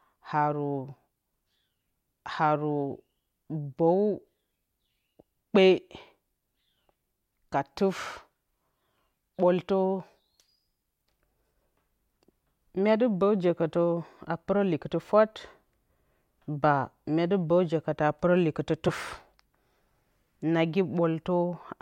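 At 7.96 s the speech jumps ahead by around 50 ms. At 18.88 s, just after "pɨrǝ likɨtɨ", a shorter jump drops around 30 ms. These are compressed frames skipped: whole blocks of encoded audio never reached playback, either lost from the file or rejected by the decoder as damaged. The jumps fit roughly two frames and one frame of about 26 ms each.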